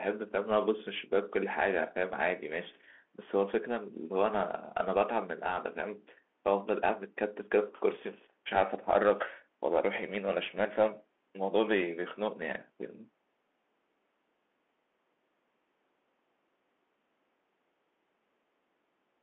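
From start to finish the speech carries a Bluetooth CVSD headset codec, and the damage is plainly audible. CVSD sends one up-or-down bit per sample with an adapting step. That leaves a granular hiss under the speech, scratchy s sounds, and distortion on loud bright moments the step cannot follow. A spectrogram shows energy held to about 250 Hz to 3.4 kHz, with nothing above 4 kHz, which fits a 64 kbps link. The waveform shows a grainy noise floor between phrases.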